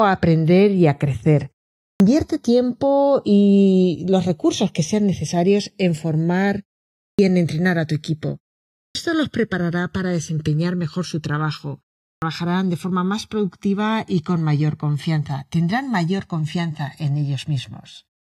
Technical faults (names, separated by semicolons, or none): channels drifting apart; clipped start after a pause